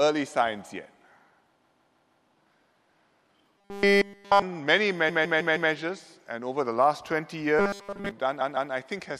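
The audio stutters from repeated frames at 1.64–2.26 s, 5.08–5.71 s and 8.40–8.71 s. A block of about 157 ms, which fits six compressed frames of roughly 26 ms, plays again four, four and then two extra times, adding about 0.63, 0.63 and 0.31 s. On a waveform or spectrogram the identical block appears copied side by side. At 3.58–4.42 s and 7.59–8.11 s the sound becomes a rigid, metallic buzz at 200 Hz throughout each stretch. This is likely robotic sound from repeated short buffers, where a 5 ms slice is looped while the real audio is skipped. A spectrogram shows evenly spaced horizontal harmonic lines every 200 Hz, and the waveform shows a short repeating pattern.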